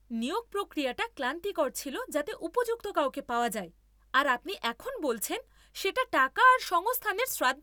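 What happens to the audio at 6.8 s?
Nothing goes wrong at 6.8 s; the speech there carries on intact, with no dropout, click, distortion or other audible fault at that point.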